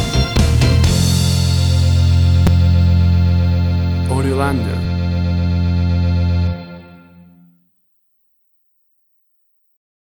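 Damaged data in the compressed stream appears at 0.37 s and again at 2.47 s. Corrupted bytes make the decoder misread those frames and lose sync until it finds the next frame header, so each spot comes through as a very brief chirp or blip.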